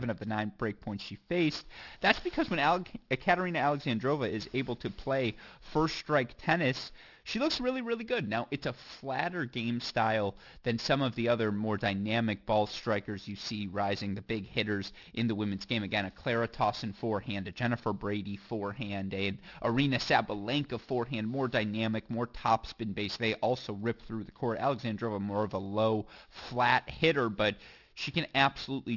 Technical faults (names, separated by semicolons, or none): aliasing